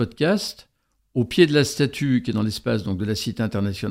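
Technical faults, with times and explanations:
Nothing here needs flagging; I listened all the way through and didn't hear a single technical problem worth pointing out.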